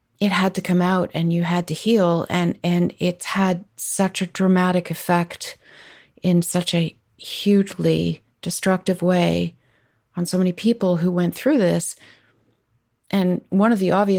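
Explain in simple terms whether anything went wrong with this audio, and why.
Nothing went wrong: the speech carries only the light, expected mark of its Opus voice compression, which keeps the full range of the sound.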